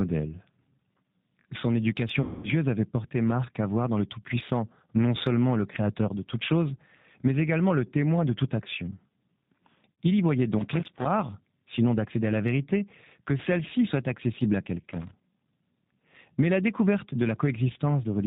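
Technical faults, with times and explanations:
Throughout: G.729 codec. The speech is plainly rebuilt at 8 kbit/s from a vocal tract filter, pitch predictor and sparse pulses, so it sounds rough and slightly synthetic with nothing above 4 kHz. Unlike packet loss, this colouring is constant.
2.21–2.48 s and 9.96 s: VoIP packet loss concealed by the speech codec. About 220 ms, then 60 ms, of audio went missing. The decoder extended its last pitch and filter into a fading buzzy tone or coloured noise, and the voice stays weak briefly afterwards. Unlike crackle, it sounds smooth.
10.59–11.07 s: loose connector crackle. Between "y voyait" and "sinon d'accéder à la", a contact making and breaking chops the signal into an irregular burst of scratchy crackle. It is rough and broadband, not the buzzy, decaying extension that concealment produces.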